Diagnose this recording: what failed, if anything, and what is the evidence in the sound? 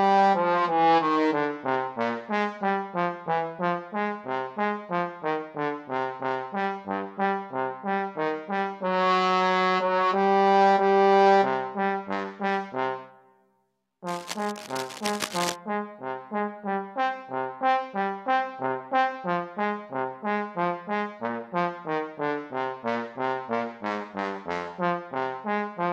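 Analogue wiring: 14.07 to 15.56 s brings a dense, uneven rustle about 10 dB under the sound, likely cable scratch noise from a worn connector shifting.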